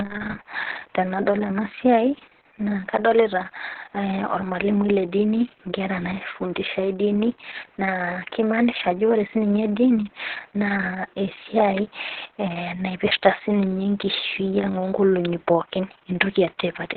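Throughout, heavy Opus voice compression caps the speech near 4 kHz and leaves it hoarse and robotic, fitting about 6 kbps; a plain low-pass filter would only muffle it.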